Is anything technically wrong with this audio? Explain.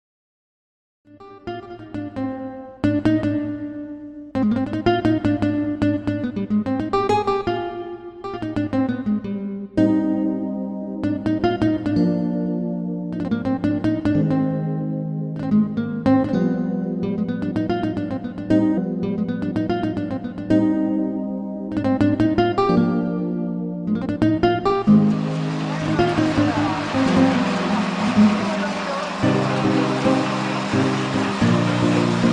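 Yes. From 18.77 to 20.77 s, two seconds of audio play a second time, preceded by a small blip at the jump back. This is a stream segment repeated: the player fetched or queued the same two-second segment twice, adding 2 s to the timeline.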